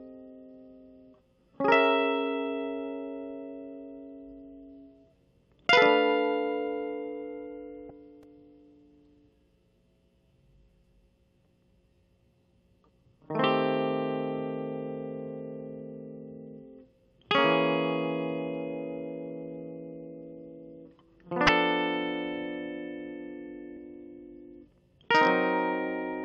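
At 7.87, 21.46 and 23.74 s the music is broken by 30 ms bursts of damaged data in the compressed stream: corrupted frames make the decoder lose sync and hunt for the next header, giving brief glitches that show as thin broadband vertical smears and abrupt waveform discontinuities.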